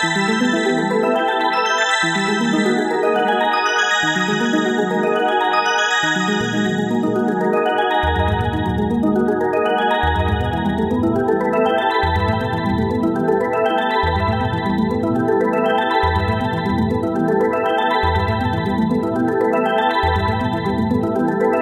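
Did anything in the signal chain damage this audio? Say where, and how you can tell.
No, nothing in these sounds stood out on listening as damage from any stage of the signal chain.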